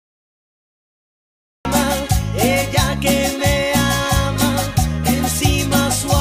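Capture or streaming began late, producing a cut-off start: the first 1.65 s is digital silence, and at 1.65 s the audio enters abruptly partway through a sound, with no natural attack or fade-in, as though switched on mid-event.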